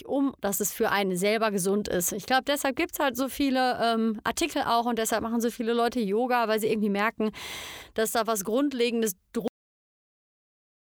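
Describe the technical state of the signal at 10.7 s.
At 10.7 s there's nothing but digital silence: it's a cut-off end. The speech stops dead at 9.48 s, mid-sound, because the final buffers never got written, so there's no decay.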